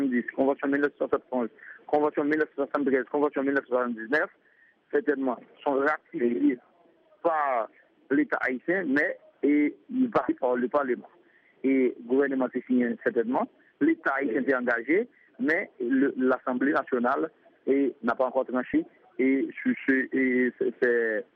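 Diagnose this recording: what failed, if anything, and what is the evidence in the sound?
The codec stage failed: compressed frames were skipped twice. At 10.29 s the audio jumps forward by roughly 400 ms, about ten 32 ms frames. At 18.74 s it jumps roughly 100 ms, a few frames. At each join the audio lurches ahead, with material missing. On a spectrogram, the spectral content shifts abruptly at each join.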